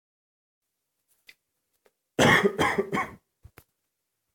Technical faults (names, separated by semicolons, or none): none